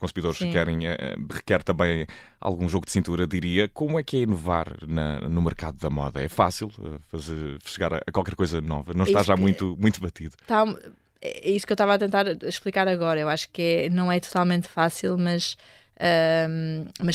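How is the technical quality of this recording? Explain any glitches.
No glitches turn up anywhere in this recording, with nothing jumping out as a technical problem at any point.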